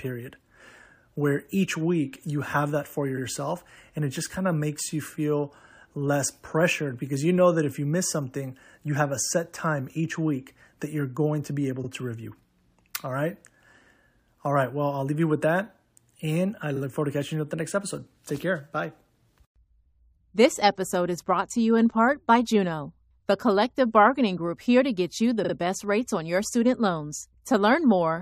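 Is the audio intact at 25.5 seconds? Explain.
No. Right after "to get you the", from 25.44 to 25.53 s, repeated frames replay a short stretch, which fits a 46.4 ms block played twice more. The result is a quick stutter that adds about 93 ms before "best rates on your". Unlike a dropout, nothing is lost; the same fragment simply recurs.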